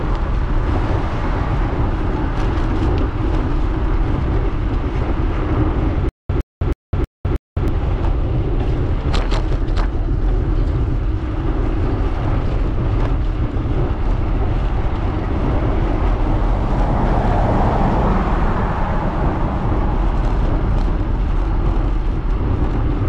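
A stutter with silent gaps runs from 6.09 to 7.68 s. The playback or stream most likely stalled, and on each retry the last fragment of buffered audio played again before the buffer ran dry. A short 113 ms burst repeats five times at a steady 318 ms cycle, each separated by 205 ms of dead digital silence. Whatever audio should have filled that stretch never plays.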